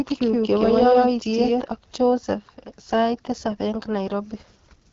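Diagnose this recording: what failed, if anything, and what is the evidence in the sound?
The speech sounds rough and raspy throughout, with nothing above 7.1 kHz. This is the AMR wideband (HD Voice) codec at 8.85 kbit/s, one of its two lowest rates, so it is a codec-stage fault. At that rate the pulse-driven vocal tract model has too few bits to shape the excitation cleanly, which produces the rasp. The top band, from 6.4 to 7 kHz, is filled with shaped noise instead of real detail.

From the very start until 1.62 s, every syllable has a second, full-band copy at about the same level, trailing by roughly a tenth of a second. It gives a flat slapback with no decay or room colour. The copy is already present when the clip begins and cuts out abruptly at 1.62 s. This is a doubled audio track, likely caused by a slower second capture path or an edit that briefly held two out-of-step copies of the same audio.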